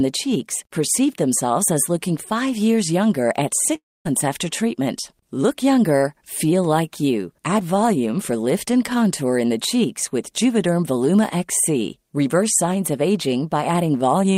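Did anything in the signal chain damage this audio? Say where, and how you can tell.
Yes, at the network stage. After "five years younger at", from 3.75 to 4.07 s, the sound smears into a fading buzz, then 240 ms of silence, resuming at "after treatment" with 300 ms lost. This is likely a long network dropout: packets stopped, concealment stretched the last sound, and the gap was never recovered.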